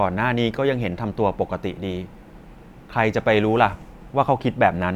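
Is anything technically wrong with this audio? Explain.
No, nothing technically wrong can be heard here.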